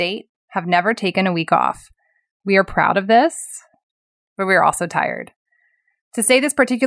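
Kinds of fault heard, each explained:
No technical faults can be heard in the speech recording: the signal holds steady throughout, with no dropouts, clipping, noise bursts or timing disturbances.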